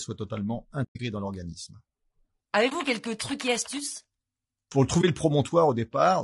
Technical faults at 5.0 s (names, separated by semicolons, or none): low-delay AAC compression; AAC frame loss with muting